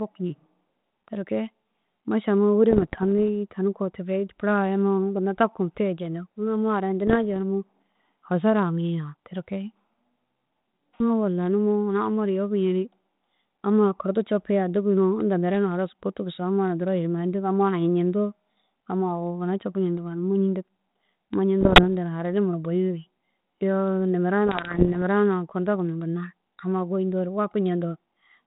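Bit errors on an ADPCM link hit the speech at 2.70–3.05 s, 7.07–7.16 s, 21.61–21.84 s and 24.47–24.97 s, over what sounds like a 32 kbit/s G.726 path. Corrupted codes throw off the decoder's step size and predictor, leaving pops, rough bursts and brief level jumps.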